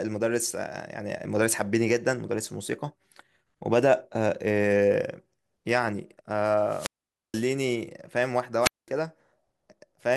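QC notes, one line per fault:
6.61–7.58 s and 8.60–8.89 s, wireless microphone squelch dropout: the radio link from the transmitter weakens, hiss swells as the FM signal fades, then the receiver's squelch closes and mutes the output, for about 0.47 s in the first event and about 0.21 s in the second, before the speech returns. On a spectrogram each event shows a brief broadband noise smear followed by an empty gap. The waveform flattens to near zero during each mute.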